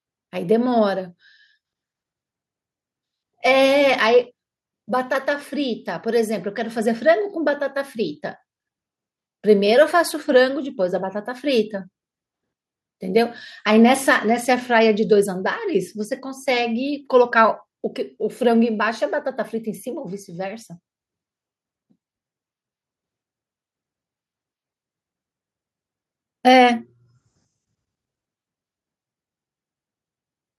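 No technical faults can be heard anywhere in this speech recording: the signal stays continuous and steady at a consistent level, with nothing breaking in or falling away.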